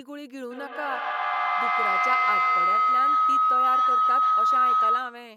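Speech with feedback howl from 0.51 s to the end: a mic-to-speaker loop gaining each pass, settling near 1.5 kHz, repeating about every 150 ms, peaking about 10 dB over the voice.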